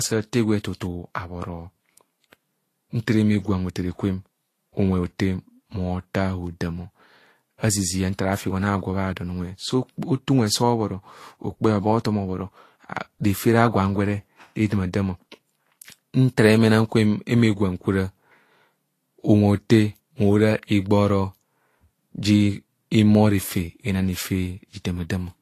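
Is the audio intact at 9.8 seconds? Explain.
No, not really. At 9.8 seconds the speech carries the same damage it has for the whole clip: it has likely been through transcoding between lossy codecs, something like a low-rate Vorbis encode later re-encoded as a mid-rate MP3. The MP3 stage wasted bits reproducing the earlier encoder's artefacts and then added its own artefacts on top. Nothing survives above 14.2 kHz, and the two sets of artefacts blur together.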